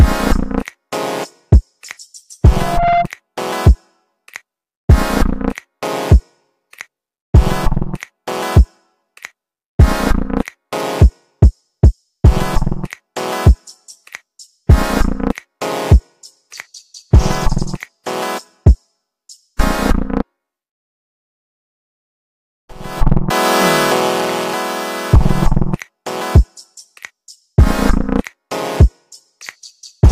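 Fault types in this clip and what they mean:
Loudspeaker feedback squeal: the microphone picked up its own loudspeaker, and around 693 Hz the loop gain passed one, so that frequency fed on itself. From 2.54 to 3.08 s a single tone swells over about a third of a second until it is roughly as loud as the rest of the sound.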